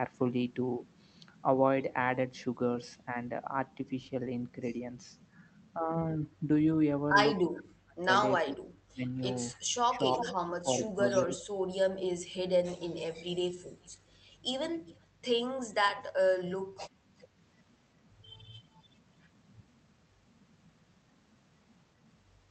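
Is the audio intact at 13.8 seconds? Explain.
No, there's an echo leak from about 13.83 to 14.97 s: a faint copy of the speech comes back roughly 395 ms late, well below the main level. It's likely a far-end speakerphone whose echo canceller let some of the playback slip through.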